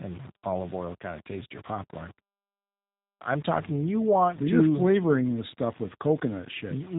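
Low bit depth without dither runs through the whole clip. The grain tracks the speech and sits only about 25 dB below it, so quieter syllables turn gritty and fade-outs sputter. This likely comes from rounding to roughly 6 bits with no dither to smooth the steps.

G.729 codec damage is also present from start to finish and is plainly audible. The speech is rebuilt from a vocal tract model and a sparse pulse excitation, which gives it a rough, synthetic edge. Nothing passes above 3.8 kHz, and the sound fits this codec's 8 kbit/s rate.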